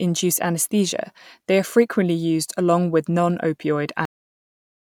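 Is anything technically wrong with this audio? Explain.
Yes, there's a cut-off end. At 4.05 s the speech just stops mid-sound and drops straight into digital silence, no natural decay at all. The final stretch of buffers never got written out, so everything after that point is simply missing.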